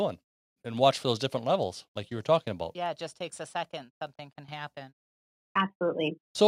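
No technical faults turn up anywhere in this speech recording. There is nothing to place in time and nothing to explain.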